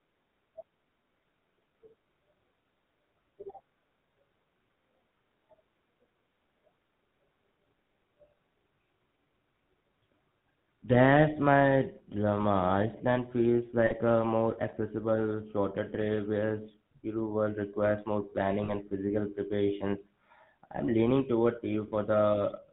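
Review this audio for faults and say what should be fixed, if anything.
The speech runs through the GSM full-rate codec for its whole length, with plainly audible damage. The codec models the vocal tract and excites it with a sparse regular pulse train, so the voice takes on a buzzy, gravelly roughness, and nothing above 4 kHz survives. The grain fits a 13 kbps full-rate coder. To prevent it, carry the call over a wideband or higher-rate codec such as AMR-WB or Opus.

Lost GSM frames occur at 13.86–13.93 s, 18.64–18.72 s and 21.88–21.91 s, lasting 40 ms, 40 ms and 20 ms, which fits two, two and one missing 20 ms frames. The decoder repeats the last good frame, leaving a short rough, metallic ring. To prevent it, improve the radio link or add error protection and interleaving.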